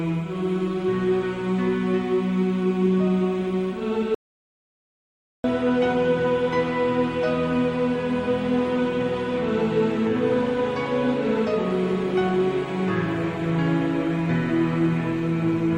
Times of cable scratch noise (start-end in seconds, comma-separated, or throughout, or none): none